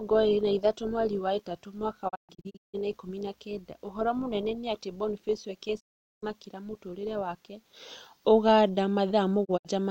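Digital broadcast dropouts occur at 2.08 to 2.76 s, between "mweri wa ĩtatũ mwaka" and "na ikũmi na kenda", as scattered holes up to 160 ms; at 5.79 to 6.24 s, before "mũtũrĩre wake"; and at 9.44 to 9.70 s. Each time, the receiver muted bad frames behind 20 ms fades, and that speech is lost.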